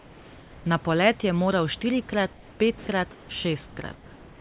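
Comfort noise in place of the background occurs at 2.33–2.6 s, 2.78–2.87 s, 3.11–3.29 s, 3.68–3.77 s and from 3.95 s to the end. In each pause the room hiss turns steady and featureless. In all but the second gap it is also about 3 to 4 dB quieter. This is likely because the sender stopped transmitting during silence, leaving the receiver to synthesise filler noise.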